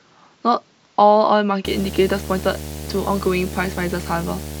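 Speech, and from about 1.65 s to the end there's video or display buzz: a 75 Hz field-rate buzz with hash riding over it, sitting roughly 10 dB under the voice. That's a screen or its video cable leaking into the audio path, with the picture's refresh cadence showing up as hum.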